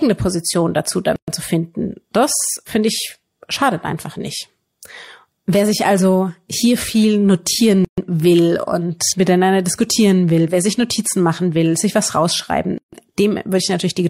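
At 1.16 s, 7.85 s and 12.78 s the speech breaks at a gap at a join of encoded pieces. Separately encoded segments were spliced untrimmed, so encoder start delay and end padding open silences of about 120, 131 and 147 ms, before "zu finden das finde", before "will und miteinander diskutieren" and after "will sich was rausschreiben", with speech resuming where it stopped.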